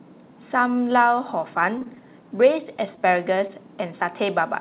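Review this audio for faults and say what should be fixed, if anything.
Late packets caused two back-to-back short stalls from a late packet, at 1.78 to 1.83 s and 1.83 to 1.87 s. The jitter buffer ran empty, so the receiver held the last sound for 31 ms and then 20 ms before resuming where it left off. Nothing is lost, but that sound drags on with a slight buzz or dip. A slightly deeper or adaptive jitter buffer would absorb delay swings of this size.

Three packets never reached the decoder in time, producing short concealed packet loss at 1.95 to 1.98 s, 2.96 to 3.01 s and 3.47 to 3.51 s. Each time 20 ms of audio is missing, and the receiver filled the gap by extending the preceding sound before blending back. The result is a brief smear or wobble, and the 2.96 s event also adds about 10 ms. Reducing loss on the network path, or adding forward error correction or redundancy, would prevent these gaps.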